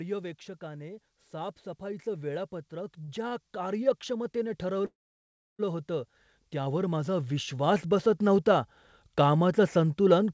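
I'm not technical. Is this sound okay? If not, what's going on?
No. From about 0.58 s to the end, the speech and the background noise slowly get louder together. This is automatic gain rising: the call's volume control judged the sound too quiet and kept turning it up gradually.

At 3.04 to 3.10 s and again at 3.28 to 3.33 s, a sound is held slightly too long. These are short stalls from a late packet. A piece of audio arrived late, so the last sound was stretched for about 39 ms and 33 ms while it waited. Nothing is lost.

From 4.86 to 5.61 s, the speech stops, fades, and goes silent for about two thirds of a second, then resumes where it left off. This is a call audio freeze, likely caused by audio held up on the network, which adds a gap without removing any speech.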